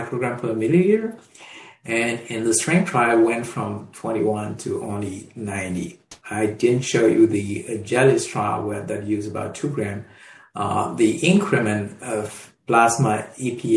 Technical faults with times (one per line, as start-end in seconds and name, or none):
none